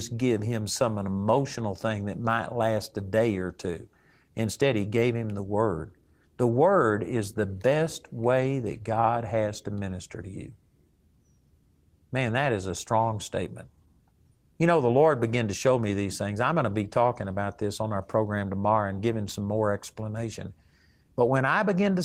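A speech recording, and nothing is technically wrong with it.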